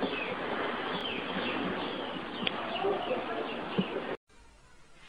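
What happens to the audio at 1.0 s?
At 1.01 to 1.03 s there is an overlapping-chunks fault. A new processing block starts before the previous one has finished, so about 25 ms of audio plays twice at the join. It is heard as a brief stutter or click, which fits 2-second chunks.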